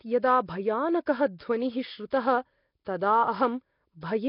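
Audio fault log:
throughout: Nellymoser compression, most likely. The speech has a rough, hissy haze and a smeared, underwater feel, with nothing above 5.3 kHz. Weaker bands seem to be swapped for filler noise, and the heavy damage fits a low rate of about 22 kbps.
1.06, 1.39, 2.10–2.12 and 2.85 s: pre-echo. Just before each sharp onset there's a short smear of hiss, 12 to 20 ms long. The codec spreads its coding noise across the whole block, so noise meant for the loud attack leaks into the quiet moment before it.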